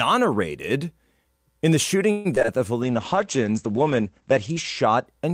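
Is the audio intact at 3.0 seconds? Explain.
No. Two faults overlap at 3.0 seconds.

A jitter buffer slow-down runs from 2.77 to 3.45 s. The receiver's buffer needed more reserve, so it repeated single pitch periods and pieces of pauses many times over. This stretches the speech by about 57 ms, playing it at about 93% speed. The pitch stays the same. Sounds are drawn out.

A call bitrate drop runs from 2.83 to 5.12 s. The bandwidth estimate fell, and the encoder dropped from 48 to 11 kbps. It stays at the lowest rate for about 1.8 s. The coarser coding makes the speech rough and watery. The audio bandwidth also narrows from 20 kHz to 8 kHz, so everything above 8 kHz is missing and the sound turns muffled.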